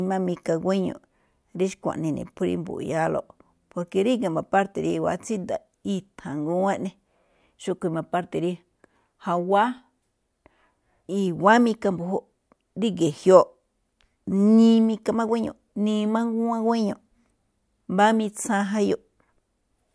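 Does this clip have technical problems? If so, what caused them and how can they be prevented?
No, there are no technical problems in this speech recording.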